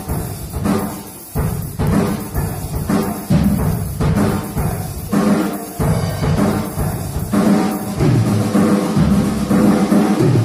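No technical faults can be heard anywhere in the audio, so there are none to describe in time order.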